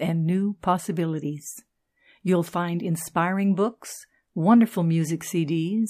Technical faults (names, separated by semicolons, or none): none